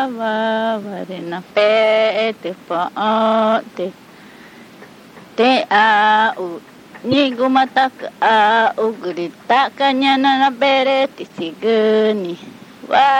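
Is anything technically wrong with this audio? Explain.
Yes. Two kinds of fault are audible.

Throughout the clip the sound has a watery, swirling quality, and sharp attacks are smeared. This is likely MP3 compression, and the damage is plainly audible, which fits a bitrate of around 64 kbps. At that rate the encoder runs short of bits, so it drops the treble above a fixed frequency and discards weak frequency lines. Those lines flicker in and out from frame to frame, which produces the swirl.

There is damaged data in a compressed stream at 0.83 s and from 7.12 to 7.14 s. Each one is a brief chirp or blip. Corrupted bytes there prevent the decoder from reading those frames correctly. It loses sync and hunts for the next valid frame header, so the audio garbles briefly and then resumes.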